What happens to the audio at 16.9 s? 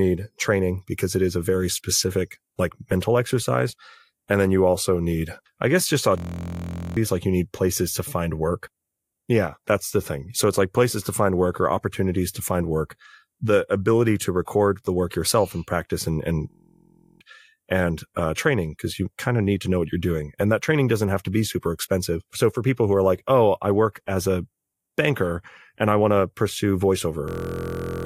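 That's a system hang loop, 16.51 to 17.21 s after "and practice and and". The computer or driver froze and replayed one 23.22 ms buffer 30 times, giving a 43.1 Hz buzz.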